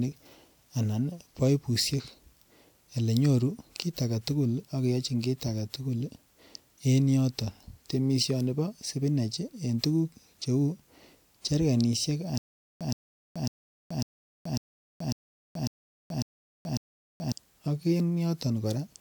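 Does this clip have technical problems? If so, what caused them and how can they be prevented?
Yes. From 12.38 to 17.32 s there is a stutter with silent gaps: a 122 ms fragment of speech repeats nine times, each followed by about 428 ms of digital silence, so the burst returns every 549 ms. The likely cause is a stalled player or stream replaying its last buffered fragment at each retry, with the intervening audio lost. A waveform shows identical short blocks separated by flat lines; a spectrogram shows matching slices between blank columns. Larger buffers and robust network handling would prevent it.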